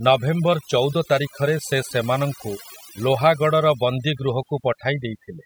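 Speech with overdone noise removal throughout: an over-aggressive reducer gates bands near its noise estimate, leaving twinkling specks and a spectrogram speckled with isolated islands.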